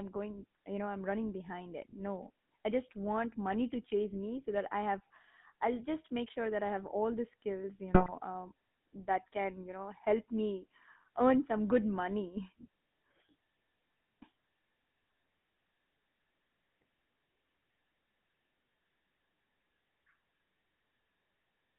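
From start to finish the speech carries the buzzy, gravelly roughness of the GSM full-rate codec, consistent with a 13 kbps stream. Its pulse-driven vocal-tract model thins the excitation, and a spectrogram shows energy confined between 150 Hz and 3.6 kHz, empty above.

At 7.94 to 8.15 s, between "all the skills you" and "um that can you", GSM bit errors corrupt the decoder's filter, pitch and gain values. The sound squawks and gargles; the waveform shows abrupt level jumps, and the spectrogram shows smeared, distorted frame-length blocks.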